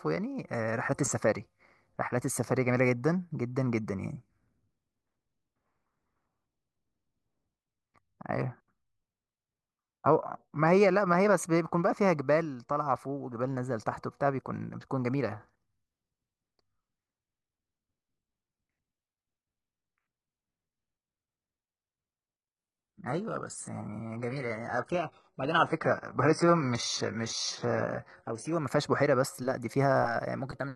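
At 22.56 s the speech suddenly degrades, with swirling codec artefacts. This is an adaptive stream at a lower bitrate. The connection slowed, so a much cheaper encoding played, one consistent with roughly 12 kbit/s. Full quality returns abruptly at 28.56 s, with no gap.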